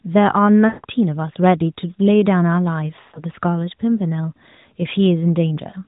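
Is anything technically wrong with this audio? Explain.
Yes. There are lost AMR speech frames at 0.68 to 0.85 s and 3.02 to 3.24 s. The decoder bridged the failed frames by repeating the last good pitch and vocal tract settings at falling gain, so the speech smears and fades before recovering roughly. The narrowband AMR-NB coding itself stays free of audible content above 4 kHz.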